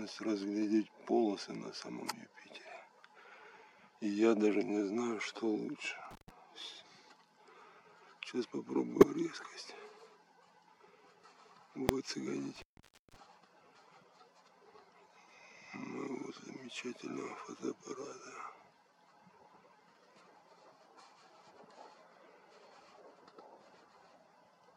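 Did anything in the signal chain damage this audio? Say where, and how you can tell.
Yes. In the analogue wiring, an intermittent contact opens the line twice: from 6.11 to 6.30 s, dropping out for about 124 ms, and from 12.56 to 13.16 s for about 513 ms. Each gap cuts the sound abruptly, with crackle at the edges as the connection breaks and remakes.

At the codec stage, a corrupt frame decoded problem shows up between 8.99 and 9.04 s. A few damaged frames were played as if valid, so misread gains and codes push energy to the wrong frequencies. The result is a short error peaking at about -10 dBFS.

In the processing chain, invalid numbers at full scale strike at 11.89 s. A calculation returned infinite or invalid values, which were forced to the largest sample value for a 0.73 ms block, which fits a 32-sample buffer. Because the block is so brief, it lands as one sharp bang.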